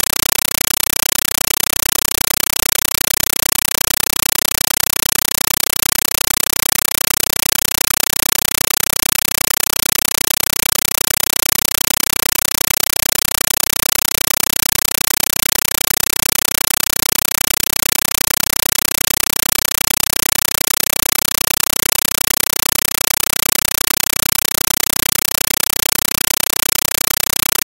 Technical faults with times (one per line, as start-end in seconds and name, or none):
0.00-27.64 compressed stream played as audio